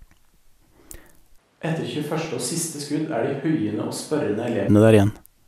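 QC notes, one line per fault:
1.39 to 4.67 s, switch to a distant microphone: the speech suddenly turns roomy and hollow, thinner in the bass and about 10 dB quieter, then snaps back to the close sound at 4.67 s. The likely cause is a failed or dropped close microphone, leaving only a farther one that picks up more room reflection. On the waveform the envelope steps down abruptly at the start and back up abruptly at the end. The spectrogram shows weaker low frequencies, smeared reverberant tails, and a raised noise floor roughly 40 dB under the speech.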